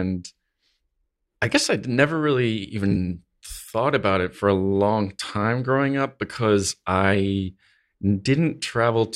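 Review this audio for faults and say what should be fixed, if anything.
Compressed frames skipped at 2.90 to 2.96 s, between "guess I never really" and "thought about it for". Whole frames were never decoded, so about 70 ms of audio jumps past. To prevent it, check file integrity after encoding and transfer, and re-encode from the original source.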